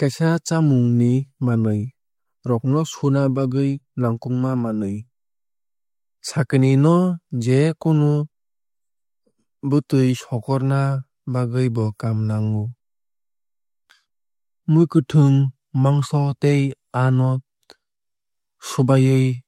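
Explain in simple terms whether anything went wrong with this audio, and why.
Nothing stood out as wrong when listening to this speech recording.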